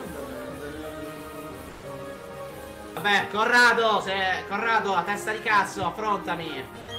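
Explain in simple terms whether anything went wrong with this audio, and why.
Yes, twice, the sound briefly cuts out and is replaced by a flat hiss or near silence: from 1.71 to 1.83 s, and again from 6.83 to 6.87 s. This is likely sound dropped by the voice detector. The sender mistook quiet sound for background and stopped transmitting, so the receiver filled the gap with comfort noise. Unlike network dropouts, there is no click, stutter or repeated fragment, just a smooth, even hush until the sound resumes.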